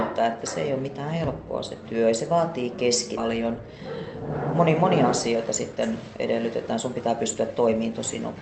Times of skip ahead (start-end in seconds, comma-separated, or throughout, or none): 3.17